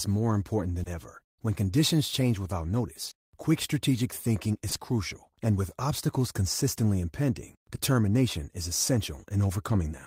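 Short concealed packet loss hits at 0.83 s after "more important", 3.05 to 3.13 s, 4.69 to 4.77 s before "crucial and with obstacles", and 7.75 s. Missing audio was extrapolated from preceding sound, so each is a brief smear rather than a silent dropout.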